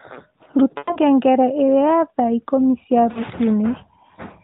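Lost AMR speech frames at 0.78 to 0.98 s and 3.12 to 3.20 s: corrupted frames failed their checks, so the decoder reused its last good pitch and vocal tract settings at falling gain. The 100 ms run drags out and fades toward silence. The 40 ms one is brief.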